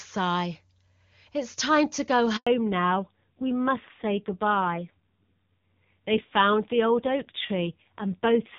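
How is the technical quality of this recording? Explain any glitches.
The recording has two linked faults, a brief dropout and then a lasting loss of high frequencies, after an initial stretch of clear wideband call audio.

Handover gap at 2.37 to 2.47 s: while the call switched networks, no speech frames arrived, so the sound cuts out for 100 ms before resuming.

Fallback to narrowband from 2.47 s to the end: the call leaves HD Voice for an older codec, nothing above 4 kHz remains, and speech sounds duller and rougher, consistent with roughly 5.9 kbit/s narrowband coding.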